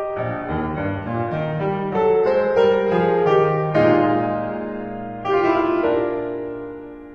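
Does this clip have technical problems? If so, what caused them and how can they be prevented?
Yes. From 0 to 5.65 s the music shows an adaptive stream starting at a low bitrate. Nothing is present above 10.8 kHz and codec artefacts are heavier, which fits a very low-bitrate HE-AAC rendition around 12 kbit/s. At 5.65 s the quality jumps with no gap, consistent with a switch to AAC-LC near 96 kbit/s once the player had measured the connection. Starting on a higher rendition, or estimating throughput before playback begins, prevents it.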